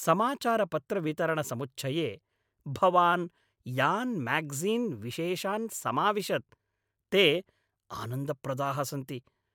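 No technical faults are audible anywhere in the recording.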